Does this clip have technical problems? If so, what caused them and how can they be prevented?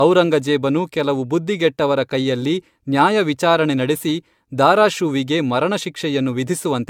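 Yes, there's generation loss throughout: swirly, hollow speech with smeared attacks and nothing above 17 kHz, likely from roughly four re-encodes, fitting AAC-LC around 96 kbit/s. Keep a lossless master and encode just once at the end.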